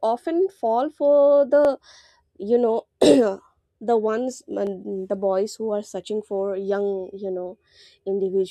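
At 1.65 s after "often fall for", 4.67 s after "the ones", and 7.69 s after "searching for young you", overlapping chunks replay 20 ms at each 3-second join, giving a brief stutter-click. A waveform shows a short repeated segment with a discontinuity; spectrograms show a thin vertical broadband line.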